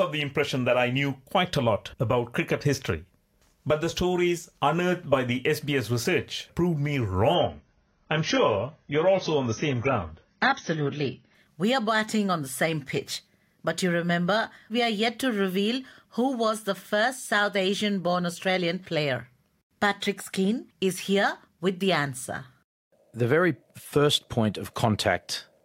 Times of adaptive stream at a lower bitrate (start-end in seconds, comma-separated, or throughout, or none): 7.35-11.35